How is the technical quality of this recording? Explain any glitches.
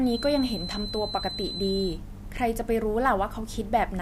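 The recording has one fault, a feedback whistle. From 0.0 to 2.0 s, a thin 4 kHz tone sits about 10 dB below the speech, likely from a loudspeaker-to-microphone loop held at the edge of feedback. Unlike a steady test tone, its level swells and fades slowly.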